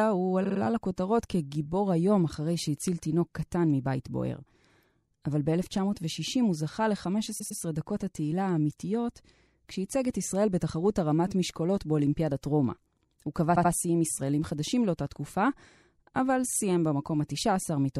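Repeated frames stutter the speech three times. At 0.43–0.59 s a 52 ms block replays three extra times, and at 7.38–7.59 s (104 ms) and 13.55–13.70 s (78 ms) twice more each. Each replay lengthens the audio and shows as identical repeated slices on a spectrogram or waveform.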